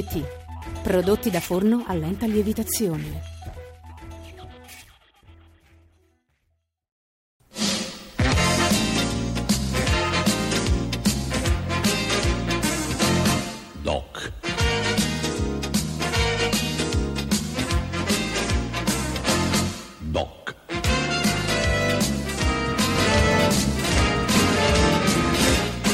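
From 22.96 s to the end, the audio carries a doubled audio track: a second full-band copy trails the original by about a second and a half at roughly equal loudness, and it cuts in abruptly. Unlike an echo or reverb, the copy has no decay tail, no room colouring and no repeats. The likely cause is the same signal being captured again through a slower path, or an edit leaving two copies out of step.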